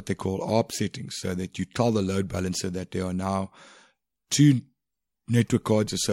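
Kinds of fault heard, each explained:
No technical faults heard.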